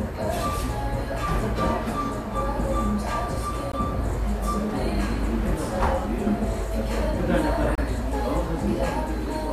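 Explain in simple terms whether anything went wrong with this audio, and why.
Twice the sound briefly drops to dead silence with sharp edges: a tiny hole at 3.72 s and another from 7.75 to 7.78 s. This is a gap between stream segments. The timing of adjoining chunks, which fits 2-second segments, left small holes, and the player filled them with silence.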